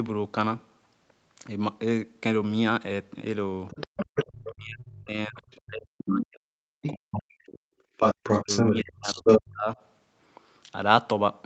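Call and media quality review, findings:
Other side's voice leaking through: far-end speech audible at 3.68–4.53, 5.39–5.56, 6.09–6.14, 6.83–7.51 and 7.97–9.4 s, mostly about 5 dB under the talker, faint at 5.4 s, louder than the talker near 8–9 s. Likely echo canceller leaving loudspeaker residue.

Speech suppressed in double talk: talker ducked hard, up to roughly 40 dB, across 4.47–7.76 s (about 3 s affected), and again 8.43–9.77 s, up to roughly 35 dB over about a second. Likely echo canceller turning down talker and loudspeaker echo together during overlap.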